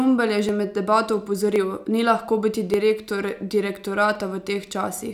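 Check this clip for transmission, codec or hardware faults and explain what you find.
Four sharp clicks are audible in the speech, at 0.49, 1.56, 2.74 and 4.15 s. The likely cause is dropped samples: less than a millisecond of the stream goes missing each time, so the waveform jumps straight to a later value. That step is heard as a brief click, with no sound lost.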